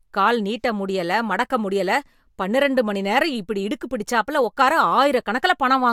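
No technical faults are audible anywhere in the recording.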